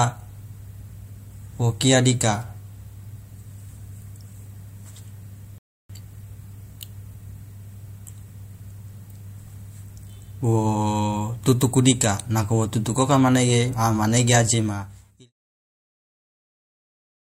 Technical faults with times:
5.58-5.90 rebuffering stall

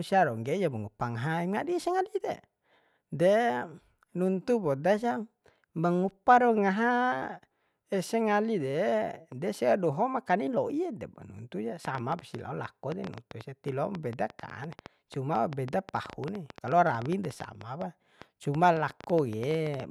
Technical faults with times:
11.85-19.81 train of clicks

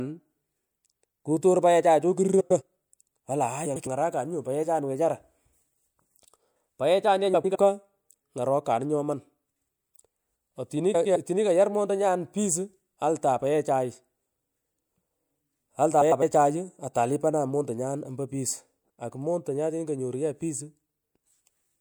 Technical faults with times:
2.40-2.62 frames out of order
3.65-3.87 frames out of order
7.34-7.56 frames out of order
10.94-11.16 frames out of order
16.01-16.23 frames out of order

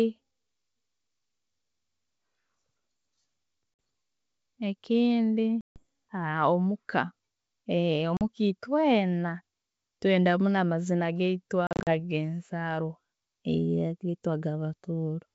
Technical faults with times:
3.80 packet loss on an ADPCM call
5.61-5.83 packet loss on an ADPCM call
8.17-8.22 packet loss on an ADPCM call
11.67-11.93 packet loss on an ADPCM call

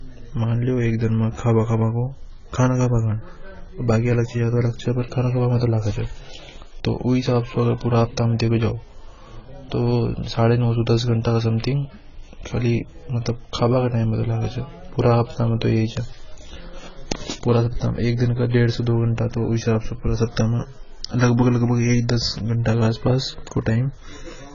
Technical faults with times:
0.00-24.54 AAC compression

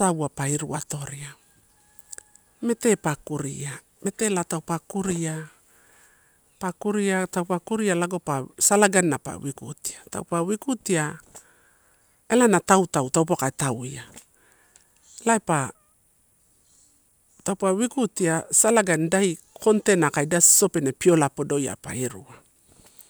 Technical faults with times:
none

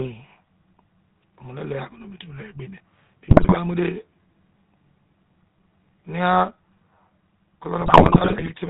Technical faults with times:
0.00-8.70 GSM full-rate codec
3.25-3.57 GSM bit errors
7.80-8.51 GSM bit errors

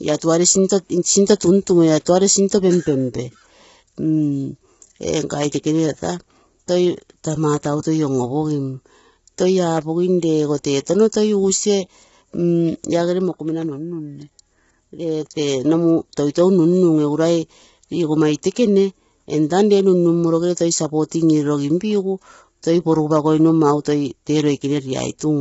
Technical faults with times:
0.00-25.41 low-delay AAC compression

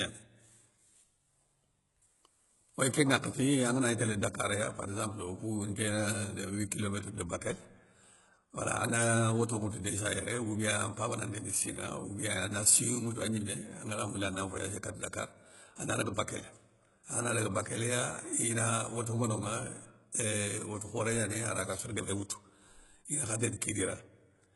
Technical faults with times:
0.00-24.55 HE-AAC compression

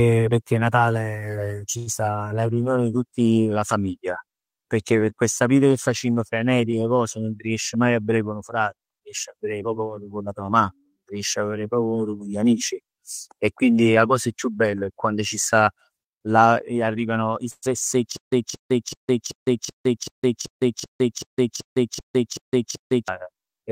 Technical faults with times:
1.77-1.89 short stall from a late packet
1.93-1.95 skip ahead
2.24-2.60 jitter buffer slow-down
14.65-15.98 jitter buffer speed-up
17.51-17.69 call audio freeze
18.17-23.08 stutter with silent gaps

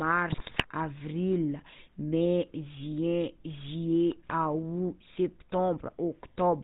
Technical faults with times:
0.00-6.63 GSM full-rate codec
0.32-0.67 GSM bit errors

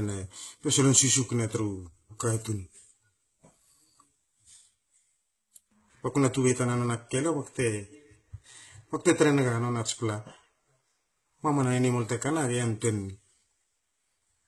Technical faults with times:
0.00-14.48 HE-AAC compression

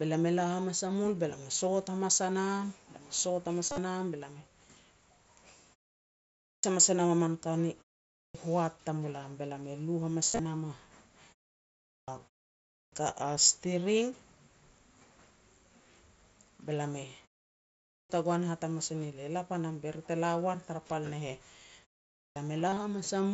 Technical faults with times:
3.66-3.78 concealed Bluetooth headset packet loss
6.37-6.63 clipped start after a pause
8.09-8.35 clipped start after a pause
10.26-10.45 concealed Bluetooth headset packet loss
11.85-12.08 clipped start after a pause
12.66-12.92 clipped start after a pause
17.84-18.10 clipped start after a pause
22.13-22.36 clipped start after a pause
22.69-22.77 concealed Bluetooth headset packet loss

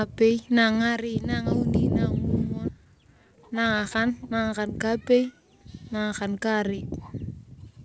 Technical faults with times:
2.68-2.70 skip ahead
2.78-5.18 jitter buffer speed-up

